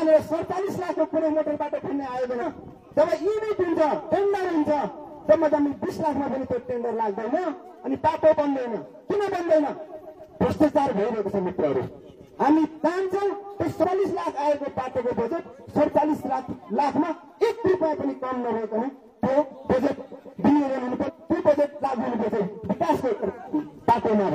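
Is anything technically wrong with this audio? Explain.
Yes. Compressed frames are skipped at 2.37–2.43, 13.80–13.85, 21.04–21.10, 22.34–22.39 and 23.50–23.55 s. Whole frames, consistent with frames of about 46 ms, never reach playback, so the sound lurches ahead by roughly 0.4, 0.2, 0.4, 0.2 and 0.2 s. Unlike a dropout, nothing falls silent; material simply goes missing at each join.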